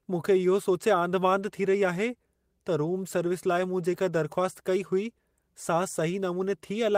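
No faults are audible anywhere in the recording.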